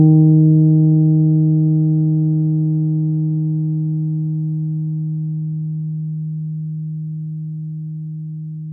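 No faults can be heard anywhere in the recording of sounds.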